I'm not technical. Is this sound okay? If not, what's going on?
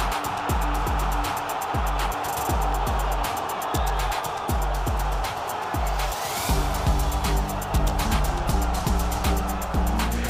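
Yes, this sound is okay. There's nothing wrong to point out in it.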